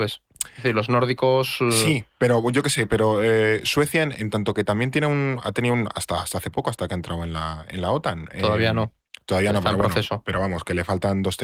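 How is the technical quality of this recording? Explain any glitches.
No glitches are audible anywhere in the recording.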